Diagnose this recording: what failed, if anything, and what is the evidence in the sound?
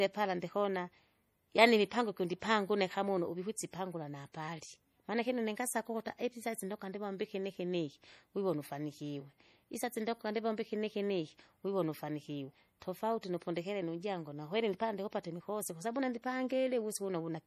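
Codec stage: watery, swirly speech throughout and nothing above 15.2 kHz, likely MP3 compression starved of bits at something like 40 kbps.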